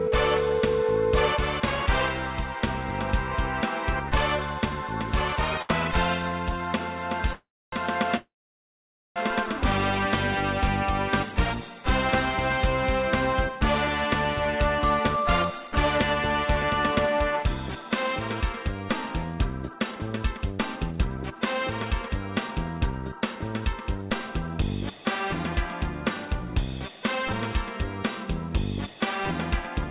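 At 5.62 to 5.71 s there is a short stall from a late packet. The buffer ran dry, so the last sound is held for 70 ms, then resumes.

Two call audio freezes follow. From 7.33 to 7.74 s, and again from 8.16 to 9.18 s, the sound decays into silence. It is silent for 0.28 s in the first and 0.87 s in the second. Delayed packets likely emptied the jitter buffer both times. Nothing is lost; playback restarts where it stopped.

From 13.59 to 28.95 s there is a jitter buffer speed-up. The buffer trims short pitch-period slices repeatedly, running at 107% speed without a pitch change. This removes roughly a second, and the sound feels hurried.

Throughout, nothing reaches above 4 kHz, which fits a G.711 mu-law call path at 64 kbps.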